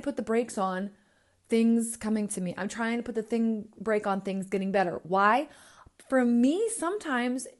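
From start to end, the speech carries a grainy, breathy edge in its upper range, with noise filling where fine detail should be. That points to Bluetooth LC3 compression, likely at a rate near 48 kbps with 10 ms frames, which strips and noise-fills the high spectrum.

At 4.96 s, a lost LE Audio frame leaves a brief 10 ms smear. The decoder repeats the previous spectrum with scrambled signs. The sound turns noisy for an instant, then resumes.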